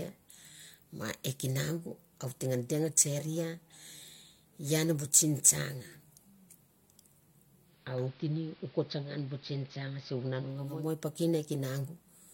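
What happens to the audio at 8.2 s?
At 8.2 s the audio is inside a digital radio blending to analogue episode running from 7.61 to 10.95 s, with "i piken" heard just after it begins. The receiver cross-fades over 467 ms to the AM broadcast: level drops about 2 dB, and hiss rises to roughly 25 dB below the signal. Unlike a plain low-pass filter, the hiss and the gradual blend in and out mark it as a switch to analogue reception.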